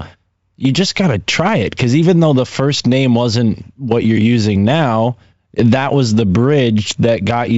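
No technical faults can be heard anywhere in this speech recording. Nothing in the sound breaks, drops out or jumps at any point.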